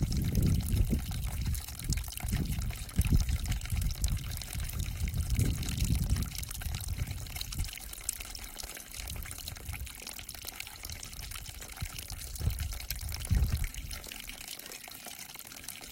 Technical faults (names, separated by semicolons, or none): none